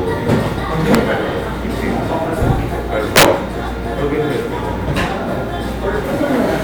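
At 0.95 s, and again from 3.16 to 3.25 s, integer overflow produces violent cracks: peaks pushed about 2 dB, then about 6 dB, past the integer limit wrap to the opposite sign instead of being held there, flipping across the full range. Clipping merely flattens peaks, so it sounds far gentler than these cracks.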